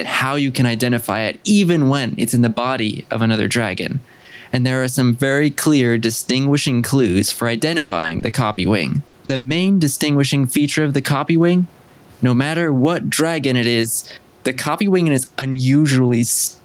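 Right through the clip there's gain pumping, most likely a gain set too hot with a fast limiter clamping it. The gain swings around 15 dB. From 7.77 to 9.47 s there's repeated packet loss, giving a robotic, choppy stretch. About half a second goes missing in a run of gaps, the longest 140 ms, each patched by stretching the last sound. At 13.81 to 13.85 s a short concealed packet loss fills a 20 ms hole with a brief smear before the real audio blends back in. Then from 15.25 to 16.11 s the repeated packet loss returns, milder, with gaps up to 40 ms making it choppy again. The room noise underneath sits about 41 dB below the speech.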